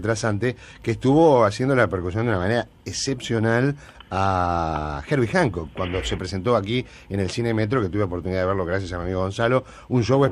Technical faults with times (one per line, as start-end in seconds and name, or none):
none